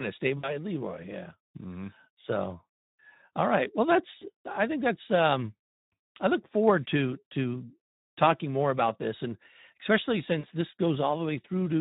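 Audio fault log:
throughout Speex codec. The speech is noisy and hoarse. The sound fits a low Speex setting of about 11 kbps. Too few bits are left for the excitation, so fine detail turns rough and grainy.
0.37–0.57 s, 4.19–4.28 s, 10.40–10.46 s VoIP packet loss concealed by the speech codec. After "to stay", before "I think that's um" and after "about this and especially", about 60, 20 and 40 ms of audio are missing. The decoder stretches the last sound to fill the gap, fading it out. Speech stays weak briefly afterwards.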